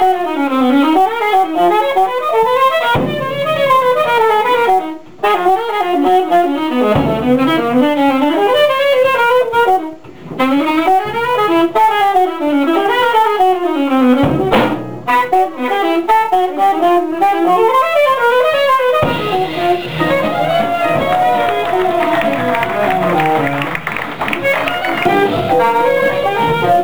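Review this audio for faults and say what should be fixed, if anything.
There's sample clock jitter running through the whole clip. The converter's clock is wandering by something like 7 microseconds rms, so each sample lands a touch early or late. Where the waveform moves fast, that timing slop becomes amplitude error. You get a grainy hiss sitting roughly 30 dB under the signal, and it thickens on loud, bright passages and drops away in the quiet gaps. To prevent it, run the converter from a clean, low-jitter clock (a decent crystal or a properly locked word clock) rather than a noisy recovered one.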